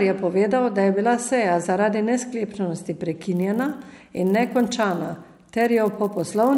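From 3.35 s right through to the end, the speech picks up a fine buzz at 100 Hz: a resampler restarted on every block. The audio was converted in 10 ms chunks, and each chunk was handled on its own. At every chunk edge the converter lacked the real neighbouring samples, leaving a small error there. At 100 edges a second those ticks merge into a buzz, and it rides only on the speech. The conversion looks like a doubling, likely 24 kHz to 48 kHz.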